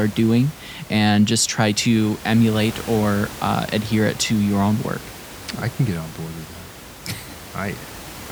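No technical faults can be heard in the speech; the only background is the room's own noise, sitting about 17 dB below the voice as part of the recording.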